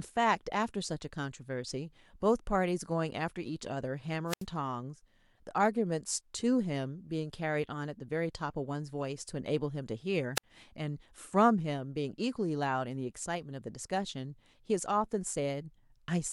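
Wireless microphone squelch dropout at 4.27 to 4.45 s and 10.35 to 10.44 s: the FM radio link fades, hiss briefly swells, then the receiver's squelch mutes the speech for about 79 ms and 57 ms respectively before the signal recovers.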